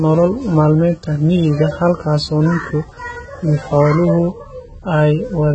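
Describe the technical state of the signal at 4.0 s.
At 4.0 s the speech carries heavy AAC compression damage, present throughout the clip. Nothing reaches above about 8.3 kHz, so the top of the spectrum is simply missing. The coder is likely AAC-LC at a very low bitrate, consistent with something near 16 kbps. It quantises each frame's frequency lines coarsely and drops detail it judges inaudible. The result sounds dull and smeared, with a warbling, fizzy edge on sibilants and held sounds.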